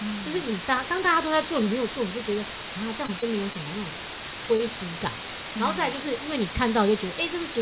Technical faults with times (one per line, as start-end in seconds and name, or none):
0.00-7.61 low bit depth with dither
3.06-3.24 short concealed packet loss
3.53-3.56 short concealed packet loss
4.56-4.61 short concealed packet loss